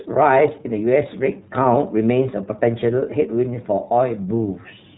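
Speech passed through the iLBC codec throughout, cut off above 3.8 kHz, with independently coded frames giving a plainly rough, synthetic texture that fits its 13.33 kbps, 30 ms mode.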